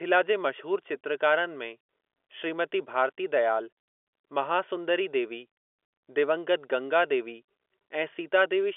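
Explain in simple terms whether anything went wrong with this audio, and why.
Nothing stood out on listening; the speech has the narrow, boxy sound of an ordinary landline call, as expected for telephone audio, and nothing else went wrong that could be heard.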